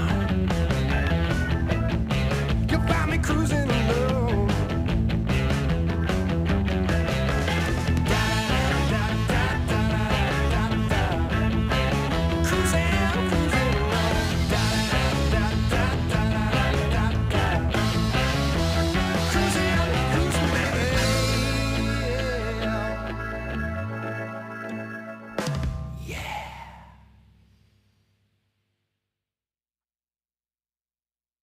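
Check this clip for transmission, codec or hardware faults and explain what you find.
A crude rate conversion runs through the whole clip. The sample rate was changed without any anti-aliasing or interpolation filter, simply by picking the nearest available sample. The pattern of skipped samples points to a conversion from 48 kHz to 44.1 kHz. The timing errors repeat in a fixed cycle and create shifted, inharmonic copies of the audio, roughly 30 dB below it. They are heard as a gritty, inharmonic fizz that rides on louder and brighter passages.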